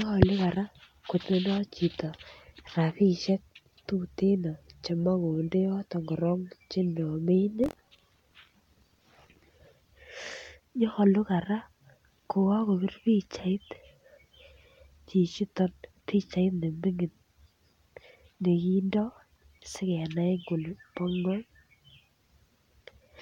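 From 7.62 to 9.45 s the speech takes on a robotic rattle at about 43 Hz, the sign of buffer tearing. The writing program and the reading hardware have drifted so they cross within each period, leaving a small slice of every buffer, under a tenth, filled with audio from roughly 50 ms earlier. The rate fits a 1024-sample buffer. The waveform shows hard discontinuities repeating every 23 ms, and the spectrogram shows evenly spaced vertical streaks across the band.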